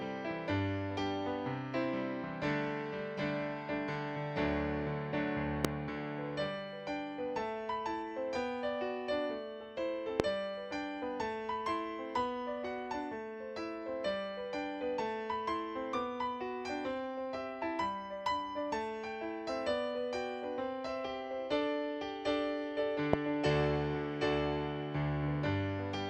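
Three loud pops stand out, at 5.65–5.67 s, 10.20–10.22 s and 23.13–23.16 s, each a single sharp thump around 25 dB above the audio. Unlike a dropout, the sound carries on beneath each one. The likely cause is a voltage spike from a plug, switch or static discharge.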